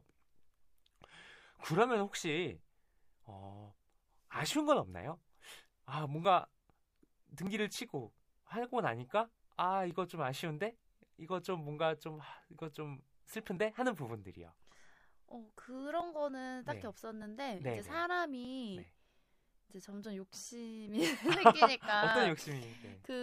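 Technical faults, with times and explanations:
0.15–22.11 s, clock drift buffer slips: there's a click or pop roughly every 1.22 s across the speech, about twenty in all, evenly spaced. That steady rhythm likely comes from two devices running on separate clocks that disagree by something like a thousandth. The buffer between them slowly drifts until a chunk gets dropped or repeated, which fits slips of around 50 samples each. Every slip leaves a discontinuity in the waveform, and that's the tick you hear.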